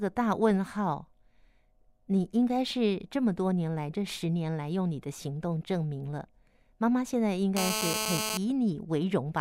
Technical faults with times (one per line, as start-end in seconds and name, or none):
7.57-8.37 GSM phone buzz